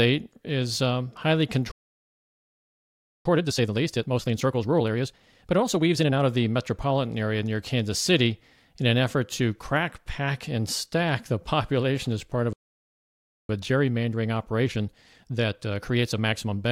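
A playback stall cuts the speech off at 1.71 s and leaves silence for about 1.54 s, until 3.25 s. A second stall runs from 12.53 s to 13.49 s, lasting about 0.96 s. Each time the speech stops mid-flow, which points to the player likely running out of buffered data or having its output thread blocked. When sound returns, it picks up from where it stopped.

Time-compressed catch-up follows each gap as the player works off its backlog by cutting out short slices and cross-fading the joins. From 3.25 s to 6.25 s the speech runs at 1.5 times normal speed. From 13.49 s to 16.49 s it runs at 1.25 times. Pitch stays normal in both, but the delivery sounds rushed.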